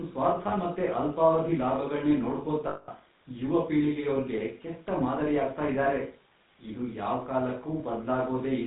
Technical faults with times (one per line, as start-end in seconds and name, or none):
0.00-8.67 GSM full-rate codec
0.48-0.54 lost GSM frames
2.68-2.89 lost GSM frames
5.84-5.88 lost GSM frames